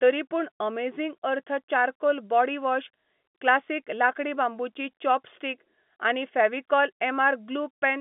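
No technical faults occur anywhere in this speech clip.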